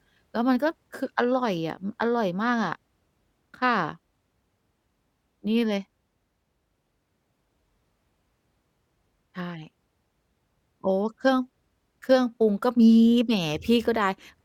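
No technical faults are audible anywhere in the recording.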